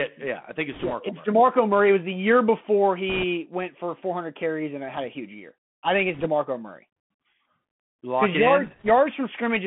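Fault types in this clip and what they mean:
Bluetooth CVSD headset codec: The entire clip passes through this narrowband codec. It sends one up-or-down bit per sample with an adapting step, which fits a 64 kbps stream. The speech is held between about 150 Hz and 3.4 kHz, with scratchy s sounds, distorted bright peaks and granular hiss underneath.
Bit errors on a Bluetooth voice link: Four short bursts of flipped bits start at 0.72, 3.09, 6.14 and 8.65 s, each 0.1 to 0.25 s long, at an error rate of a few percent. Because each bit carries little weight, they produce rushing crackle rather than loud clicks.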